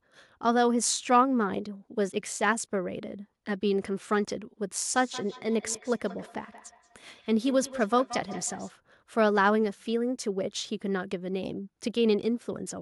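From 4.96 to 8.74 s the speech carries a feedback echo between two devices: a second device in the room replays the call, its microphone recaptures it, and neither canceller removes it. Repeats arrive about a fifth of a second apart, peaking about 16 dB below the speech, thinner and ringier each pass, appearing on a spectrogram as evenly spaced, fading copies of each syllable.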